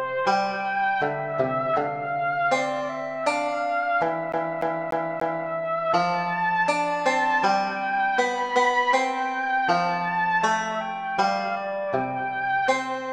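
From 4.32 to 5.49 s the disc gets stuck on one turn: a scratch keeps kicking the laser back, so a 292 ms slice repeats four times with tiny mutes.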